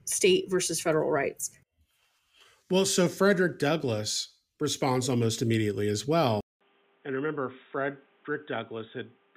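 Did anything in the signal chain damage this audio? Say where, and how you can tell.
Yes: an input switched to a poorer device at 6.41 s, after "responds almost immediately as". A 200 ms gap precedes duller sound, roughly 5 dB quieter, cut off above 3.8 kHz, with a new noise floor about 30 dB down, likely a driver-level switch to another microphone.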